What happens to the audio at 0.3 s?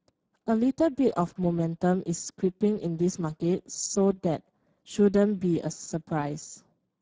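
At 0.3 s the speech carries Speex codec damage, present throughout the clip. The CELP coder has too few bits for the excitation, consistent with roughly 10 kbps, so the sound is plainly noisy and hoarse. A spectrogram shows smeared, grainy harmonics rather than crisp striations.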